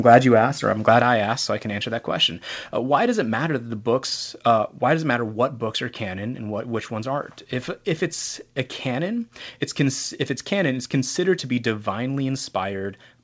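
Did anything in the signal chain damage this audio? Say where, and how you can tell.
Yes. At the converter, from 0.13 to 0.18 s, just before "you asked or I'm", peak tops are sheared flat with a crackling edge. This is likely microphone overload, about 2 dB past full scale. It is distortion, not a level change.

In call processing, the microphone volume stepped down at 1.02 s, between "asked or I'm glad" and "I asked so I". Voice and background drop together by about 5 dB, likely from automatic input-gain reduction. It is a clean step with no crackle.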